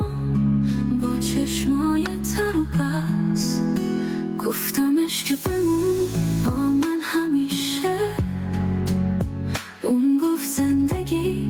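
Gain pumping throughout: likely excessive input gain driving a fast limiter, so the gain swings by about 15 dB under each loud sound.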